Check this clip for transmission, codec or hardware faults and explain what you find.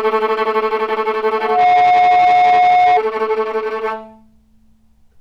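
A hardware fault is present: loudspeaker feedback squeal from 1.37 to 3.01 s. The microphone re-captures its own loudspeaker, so a 722 Hz tone self-reinforces, swelling within about a third of a second to roughly 10 dB above the sound.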